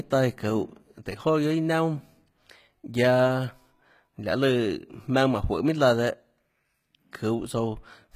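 Throughout, the speech has a gritty, metallic top end and lisping s sounds, with nothing above 14.9 kHz. This is likely HE-AAC compression near 20 kbps, with rebuilt treble.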